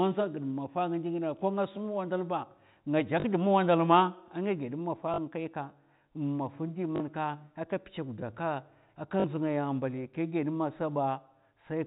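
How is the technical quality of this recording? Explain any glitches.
The speech carries four short glitches, heard against a telephone-band sound with nothing above 4 kHz, as G.711 coding gives. At 3.2, 5.14, 6.96 and 9.2 s, a 40 ms robotic stutter buzzes briefly. That is packet loss with the last packet repeated: the receiver replayed a 20 ms chunk twice.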